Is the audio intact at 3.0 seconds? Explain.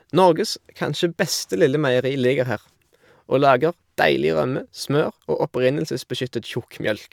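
Yes, the speech at 3.0 seconds plays through intact, with no dropout, click, distortion or other fault at that moment.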